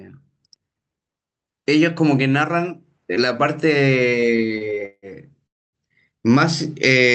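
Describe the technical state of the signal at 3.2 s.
At 3.2 s the speech comes through intact with no fault, carried by the call path with its band limit of 8 kHz.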